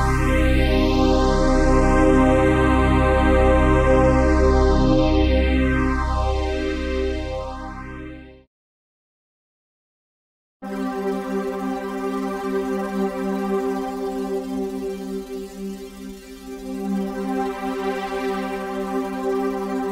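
No technical faults can be heard anywhere in the audio.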